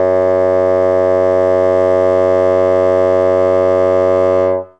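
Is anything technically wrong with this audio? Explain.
No, the music comes through as a steady, intact signal with nothing technically wrong to point to.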